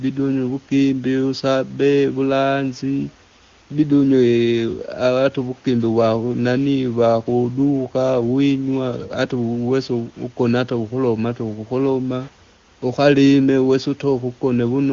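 There's nothing to flag in this speech recording: it has come through an AMR wideband (HD Voice) path, which fits the 23.85 kbit/s mode with its top end stopping around 7.3 kHz, and no faults turn up anywhere along the way.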